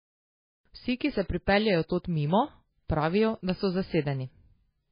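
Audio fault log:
Throughout, MP3 compression: the speech has no content above 5 kHz and carries heavy codec damage, with a watery, swirling texture and metallic chirps on s sounds. This is likely a low-bitrate MP3 encode, and the damage fits a bitrate of roughly 17 kbps. With so few bits, the encoder cut the treble at a fixed point and dropped weak frequency lines that switch on and off between frames, which causes the swirl and smears consonant attacks.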